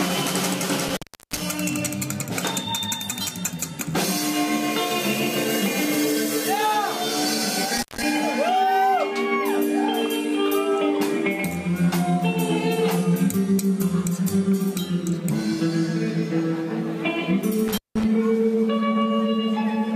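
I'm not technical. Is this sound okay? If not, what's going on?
No, there's an intermittent contact: a loose cable or plug briefly losing connection. The sound drops out with a crackle around 0.88–1.42 s (cut for about 0.37 s), 7.77–8.03 s (about 0.16 s) and 17.68–18.05 s (about 0.18 s).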